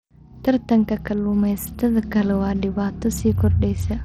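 Throughout the speech, nothing survives above 15.9 kHz, the upper bands flicker, and gritty noise with aliasing rides on the sound, pointing to a starved bit pool near 80 kbps: likely Bluetooth SBC compression. Its grit is coarse and unshaped, unlike MP3's watery swirl.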